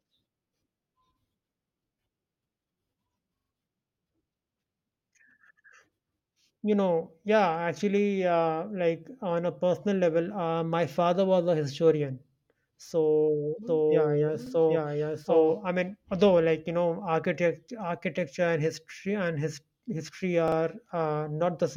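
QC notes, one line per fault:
3.37–3.50 s, 14.46–14.51 s, 20.48–20.57 s: repeated buffer. Replacement audio arrived late at each point, so the device replayed its last buffer. A piece of speech about 43 ms long repeats with a hard join at every repetition, which fits a 2048-sample buffer. The block plays 3 extra times at 3.37 s, once at 14.46 s, and twice at 20.48 s, just after "history and his history". Each event sounds like a quick stutter.
13.67–15.58 s: doubled audio track. A second full-band copy of the speech runs around 0.7 s behind the original at roughly the same level. It has no decay or room colour, so it reads as an exact duplicate rather than an echo. It begins and ends abruptly, and it ends just before "I mean although like". A slower second capture path or two misaligned copies left in an edit is the likely cause.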